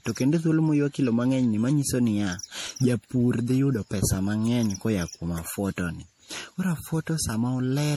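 Throughout the speech there is generation loss. It sounds swirly, smeared and hollow, and consonant attacks blur. The likely cause is repeated MP3 re-encoding, around seven passes, at a rate that fits 64 kbit/s. Each pass stacked fresh quantisation noise and spectral holes.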